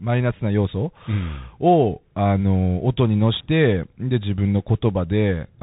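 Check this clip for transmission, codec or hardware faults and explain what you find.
One fault affects the whole clip. Bluetooth CVSD headset codec, throughout: each sample becomes one up-or-down bit with an adapting step size, consistent with a 64 kbps stream. Nothing passes above 3.8 kHz, so the speech sounds boxed-in. Loud high sounds outrun the step and distort, s sounds turn scratchy, and a granular hiss sits underneath.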